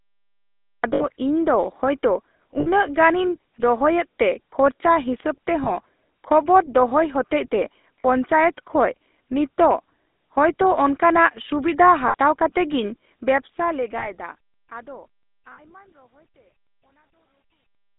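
The speech runs through the GSM full-rate codec from start to finish. It is band-limited to roughly 250 Hz to 3.7 kHz, with the buzzy, gravelly roughness of pulse-excited vocal-tract coding, which fits 13 kbit/s full-rate GSM. The grit sits inside the voice itself, unlike added noise or hiss.

The opening is a cut-off start. Digital silence gives way at 0.84 s straight into the middle of a sound, with no attack. That abrupt entry separates it from an editor's fade-in.

Lost GSM frames occur at 0.94, 2.6, 5.64, 8.0 (just after "ᱠᱷᱚᱵᱚᱨ ᱫᱚᱦᱚᱭ ᱦᱚᱛᱮᱡᱛᱮ"), 12.08 (just before "ᱠᱟᱛᱮ ᱜᱤᱧ"), 13.98 and 15.52 s. Each gap, lasting 20 to 60 ms, is filled by repeating the last good frame. The result is a held, metallic ring rather than a silent dropout or a click.

From 13.12 s, just after "ᱠᱟᱛᱮ ᱜᱤᱧ", the smooth fade-out to the end carries truncation distortion on a fade. The fade is stepped without dither at a resolution that points to about 11 bits. 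It is worst from 15.07 s to 17.99 s, where the quiet tail turns gritty, unlike a clean, steadily falling fade.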